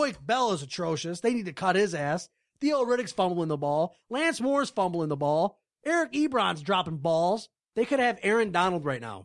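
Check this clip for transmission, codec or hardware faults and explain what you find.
Nothing here to flag: the speech comes through without any transmission, codec or hardware trouble that I can hear.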